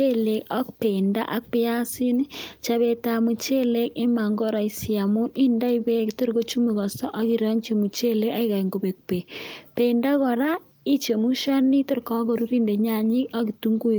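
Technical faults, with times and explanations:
Nothing technical stands out in this speech recording; it runs along from the first moment to the last without anything going wrong.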